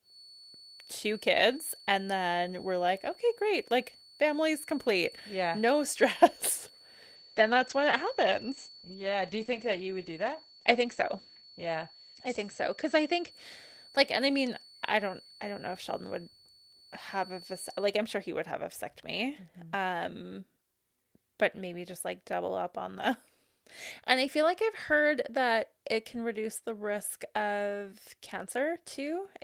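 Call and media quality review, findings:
Feedback whistle, 0.0–17.98 s, stopping just before "I'm sure he would". A thin 4.4 kHz tone sits well below the speech and swells and fades slowly in level. Likely an acoustic speaker-to-mic loop held at the edge of feedback. It never builds into a howl, and the wobble separates it from a fixed electrical interference tone.

Call bitrate drop, 7.17–14.69 s. The encoder falls from 32 to 10 kbps, holding the lowest rate for about 4.4 s. Audio bandwidth shrinks from 20 kHz to 8 kHz, giving muffled, watery speech, likely after a fall in the bandwidth estimate. There are no gaps or dropouts, so this is not packet loss.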